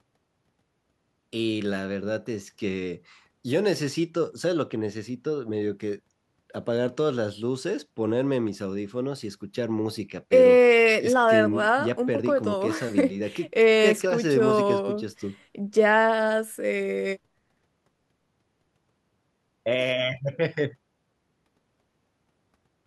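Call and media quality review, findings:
No technical faults were found in the signal path for this speech recording, so there is nothing to raise against any component.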